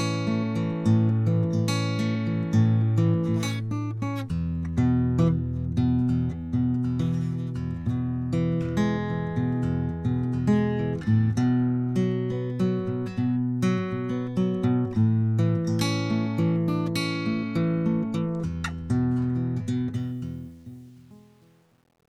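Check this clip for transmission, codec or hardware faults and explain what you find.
One fault: truncation distortion on the closing fade, from 19.94 s to the end at 22.09 s. The fade stage keeps too few bits and adds no dither, which fits a word length of about 9 bits. As the music fades out from around 20 s, the falling level reaches the coarse steps and the waveform collapses into a few square levels. From 20.49 s to the end the tail turns gritty.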